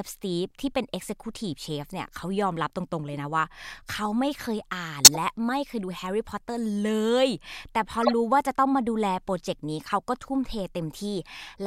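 Harsh blips of displaced noise break into the speech at 5.05–5.17 s, loud, peaking around -5 dBFS, at 8.03–8.12 s, a little quieter, and faintly at 9.84–9.87 s. Each is a corrupt frame decoded. Flipped bits in the compressed data were decoded anyway, so misread gains and codes threw energy onto the wrong frequencies for the span of the damaged frames. The first, longest burst points to several bad frames in a row.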